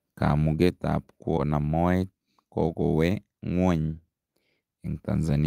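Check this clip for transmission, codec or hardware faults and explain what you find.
Two transmission faults appear in this speech.

At 1.37 to 1.39 s there is a skip ahead: about 0.7 s of audio was discarded and playback jumps straight on, leaving no silent gap as a dropout would.

From 1.47 to 2.28 s a jitter buffer speed-up plays the speech at 112% by trimming pitch-period slices, removing about a tenth of a second. It sounds hurried while the pitch stays put, unlike a resampling error.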